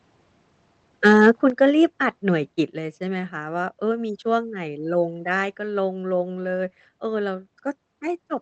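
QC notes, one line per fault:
1.05–1.3 s, microphone overload: The microphone input level was likely set too high, so the loudest peaks ran past the converter's ceiling by about 3 dB and had their tops sheared flat, affecting around 2 percent of the samples in this stretch. Flattened waveform tops add a burst of harmonics that the speech never had, which is heard as a harsh, crackling edge riding on the loudest syllables.
1.5 s and 2.52 s, microphone volume stepped down: Reacting to the overload, the call software likely cut the device's input gain in two single jumps, first by about 8 dB and then by a further 4 dB or so. Because the change is made at the microphone rather than on the voice alone, speech and room background fall in level together, abruptly, with the first drop arriving just after the distorted peak.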